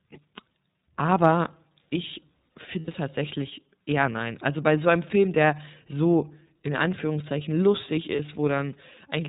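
Throughout, the iLBC codec narrows the speech to telephone band, with a hard spectrogram ceiling near 4 kHz and a plainly rough, synthetic texture. Frames code independently, and the sound fits the 30 ms, 13.33 kbps mode.

At 2.79 to 2.88 s, lost iLBC frames leave about 90 ms, consistent with three missing 30 ms frames. The decoder repeats the last pitch cycle mixed with noise, heard as a held, buzzy vowel that fades. The spectrogram shows frozen, smearing harmonics, and the waveform shows repeating periods shrinking. At 8.16 s a single 30 ms loss gives a brief buzzy hold, and normal coding resumes almost immediately.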